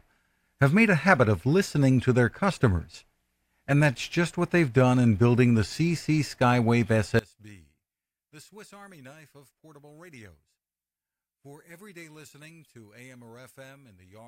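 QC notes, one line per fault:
7.19–14.3 s, one channel inverted: from 7.19 s to the end, the speech drops sharply in level, by about 26 dB, leaving a faint residue in place of the centred voice. The likely cause is one stereo channel flipped in polarity, so when the two are summed to mono, everything they share cancels. On a waveform the envelope collapses abruptly at 7.19 s; a spectrogram shows the whole band darkening.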